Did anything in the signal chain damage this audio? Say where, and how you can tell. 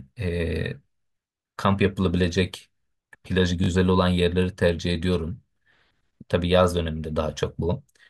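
Yes, at the driver or buffer stage, a repeated buffer. New audio arrived late, so the device replayed its last block twice more, from 3.64 to 3.68 s. Each repeat sounds like about 20 ms of speech, which fits a 20 ms buffer, and the hard joins produce a brief buzzy stutter.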